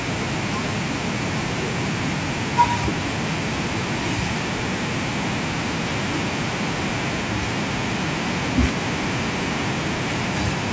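No technical faults can be heard in the speech, which carries the normal signature of call microphone processing, with the lowest bass trimmed and nothing above 8 kHz.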